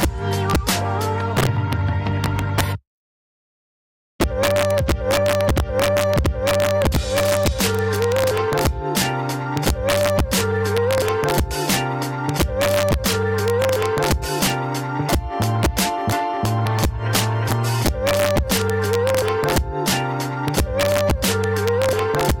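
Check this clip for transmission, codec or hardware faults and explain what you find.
Integer overflow runs through the whole clip: the signal is pushed about 3 dB past full scale, and instead of being limited, the peaks wrap around to the opposite sign. Under one percent of samples are affected, but each loud moment cracks violently, far sharper than clipping. The waveform shows spikes jumping rail to rail, and the spectrogram shows broadband vertical streaks.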